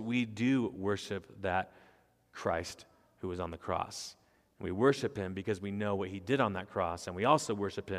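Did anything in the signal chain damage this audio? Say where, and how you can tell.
No, no damage is audible.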